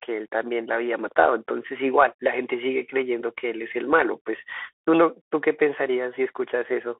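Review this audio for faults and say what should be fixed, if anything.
The Bluetooth CVSD headset codec is audible throughout. Nothing passes above 3.8 kHz. One-bit up-or-down step coding leaves scratchy s sounds and a granular hiss.

To prevent it, record through a wideband connection or a wired microphone instead of the Bluetooth headset voice link.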